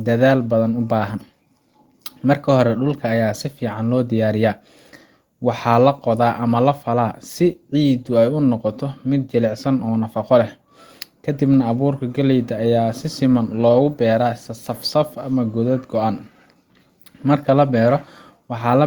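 No technical faults can be heard anywhere in the recording; the speech signal holds steady and intact throughout.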